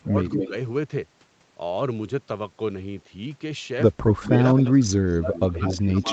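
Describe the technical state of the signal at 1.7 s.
At 1.7 s the signal is intact, with only the normal band-limiting of call microphone processing, which leaves nothing above 8 kHz.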